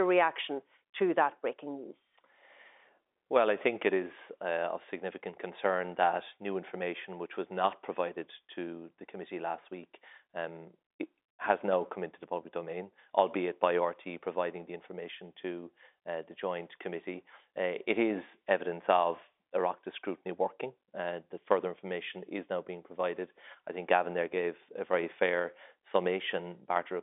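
No faults can be heard.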